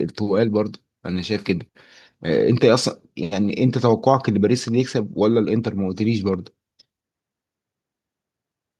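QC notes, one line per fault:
No faults heard anywhere in the speech.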